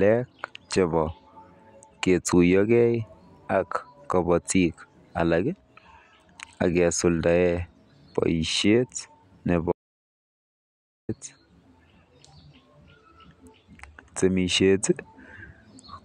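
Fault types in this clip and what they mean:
Audio dropout to silence: the speech cuts off mid-flow at 9.72 s and comes back at 11.09 s, leaving about 1.37 s of dead digital silence with no room tone, so whatever was said there is gone. Likely a lost input, with the recorder writing zeros meanwhile.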